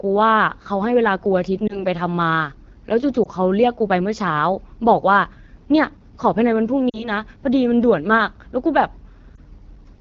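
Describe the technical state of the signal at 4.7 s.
At 4.7 s the speech is passing through the AMR wideband (HD Voice) codec, as it does for the whole clip, and the damage is plainly audible. The coder rebuilds sound from a pulse-excited vocal tract model up to 6.4 kHz and fills the band up to 7 kHz with shaped noise. The coarseness points to one of its lowest modes, most likely 8.85 kbit/s, where too few bits reach the excitation. The result is a rough, raspy voice.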